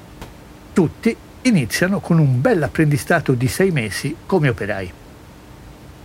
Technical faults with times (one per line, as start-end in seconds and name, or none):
none